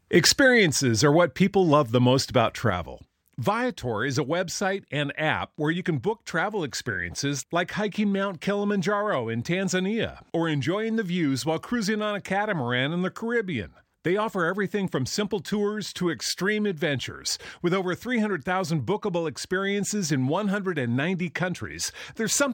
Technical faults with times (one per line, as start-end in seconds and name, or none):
2.70-22.53 one channel drops out